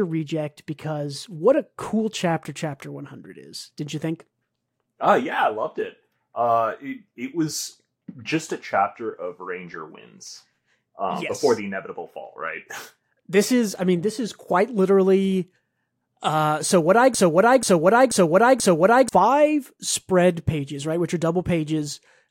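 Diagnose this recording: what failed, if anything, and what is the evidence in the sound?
From 17.14 to 19.09 s, right after "uh so what I", a broken-record loop repeats one 485 ms fragment four times back to back, replacing the audio due there. Likely cause: a stalled playback or stream buffer resending its last held block.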